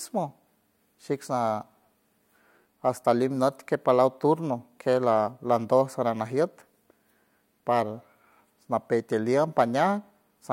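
Nothing technical stands out in this speech recording; there's no fault to point to anywhere in it.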